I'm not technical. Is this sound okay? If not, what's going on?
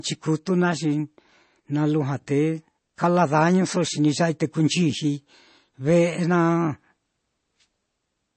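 No, not quite. All the way through this speech there's a plainly audible watery, swirly quality, and the top end is missing: nothing comes through above 8.3 kHz, so s sounds lose their crispness and the sound feels a bit muffled. That's likely MP3 compression. When the encoder is short on data it drops the quieter details, which flicker in and out from moment to moment, and it chops off the highest frequencies altogether.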